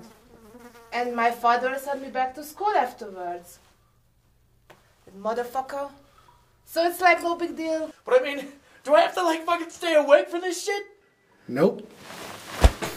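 No technical faults are audible anywhere in this audio.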